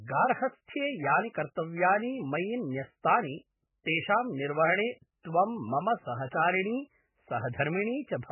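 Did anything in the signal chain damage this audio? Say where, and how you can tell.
Yes, the codec stage: nothing above 3 kHz, plus a watery, swirly smear across the speech, which fits heavy MP3 compression, likely squeezed to around 8 kbps.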